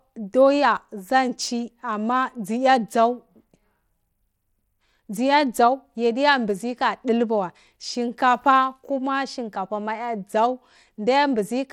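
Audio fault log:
throughout: Bluetooth SBC compression. Gritty grain sits on the speech, plainly audible, and nothing is heard above 17.2 kHz. The likely cause is SBC coding at a rate near 96 kbps. Starved top sub-bands lose their bits, and coarse quantisation adds grit.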